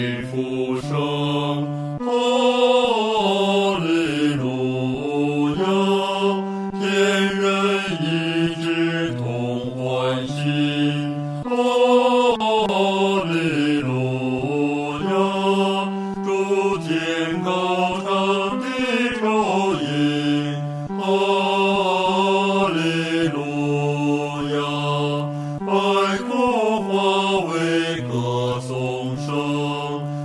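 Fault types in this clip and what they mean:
Resampler restarted on every block: from 24.2 s to the end, each 20 ms block is converted on its own, leaving a small error at every edge. The result is a 50 Hz buzz that, unlike mains hum, disappears whenever the sound stops.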